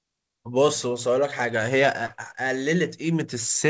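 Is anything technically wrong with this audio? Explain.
Yes. From 2.06 to 2.12 s there is a short concealed packet loss: about 40 ms never reached the decoder, so the receiver stretched the preceding sound, leaving a brief smear.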